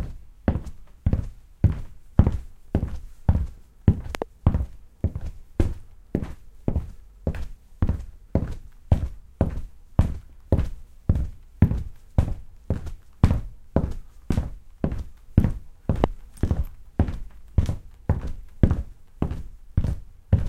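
At 4.15 to 4.24 s there's a double loud pop, then a single one at 16.04 to 16.06 s, both jumping well above the sound, likely from a voltage spike like a plug or switch.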